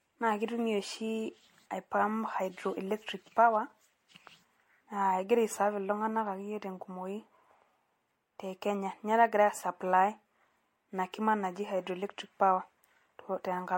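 Throughout the speech, the sound is swirly, smeared and hollow. Consonant attacks blur rather than snap. Nothing is present above 16.5 kHz, and the top band cuts off sharply. The damage is heavier than a single lossy pass would leave. It fits an MP3 at 64 kbit/s, likely re-encoded around seven times, which is generation loss. Each pass quantised again on a shifted frame grid. Noise and spectral holes stacked up.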